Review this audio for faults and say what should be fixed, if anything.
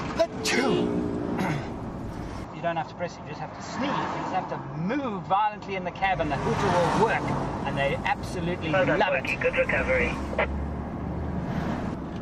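From 2.44 s to 6.04 s the audio loses everything above 7.6 kHz, drops by roughly 5 dB and picks up a new noise floor well below the signal, with no gap at either transition, most likely an input switched to a poorer device. Lock the recording input to one device and disable automatic switching to headsets or call profiles during capture.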